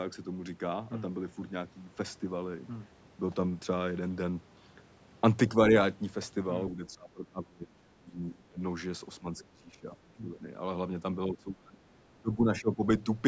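From 6.76 to 7.73 s the talker's speech sinks sharply, by something like 30 dB at its deepest, then dips again at 7.93 to 8.6 s, 9.2 s, 9.5 to 10.46 s, 11.28 to 11.78 s and 12.19 to 12.84 s, each time by roughly 15 to 25 dB, so the voice ducks and breaks into pieces. This is speech suppressed in double talk: both sides were likely talking at once, and the echo canceller, unable to separate the talker from loudspeaker echo, turned everything down.

Between 9.38 and 9.45 s a brief scrap of a second voice slips through, faint at around 25 dB below the talker. This is the other side's voice leaking through, likely loudspeaker playback that the echo canceller failed to remove fully from the microphone signal, surfacing for a moment in the middle of the double-talk stretch.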